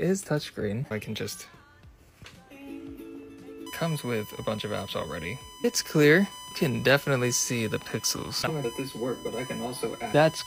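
From 3.66 s to the end, a steady 1 kHz USB whine sits about 20 dB under the sound: the bus's 1 ms frame current is leaking in through power or ground.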